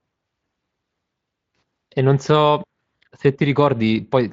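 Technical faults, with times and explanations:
No technical faults detected.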